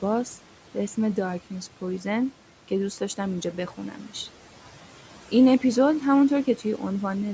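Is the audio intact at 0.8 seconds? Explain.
No. A noise suppressor is acting on the whole clip, 0.8 s included, lowering frequency bands it judges to be steady noise by about 11 dB frame by frame, so the room noise pumps between and under the speech.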